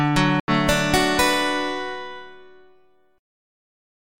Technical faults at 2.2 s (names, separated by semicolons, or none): none